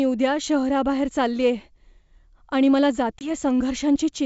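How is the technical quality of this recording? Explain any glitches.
One glitch stands out against the clear wideband sound of G.722 at 64 kbit/s. Packet loss on an ADPCM call occurs from about 3.19 to 3.30 s, just after "आणि मला": about 20 ms of audio, roughly a couple of packets, drops to hard-edged silence. The decoder's adaptive predictor and step size then disagree with the sender's, so the speech comes back briefly distorted before settling.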